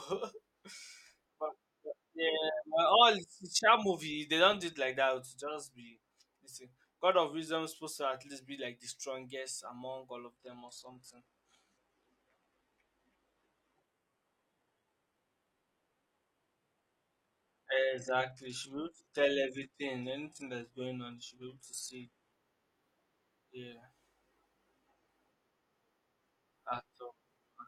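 From 10.3 s to 22.3 s the speech abruptly turns dull, with nothing above 12.3 kHz and more codec artefacts, yet no gap. This is an adaptive stream at a lower bitrate, which points to a drop from roughly 96 kbit/s to 16 kbit/s HE-AAC when the connection slowed.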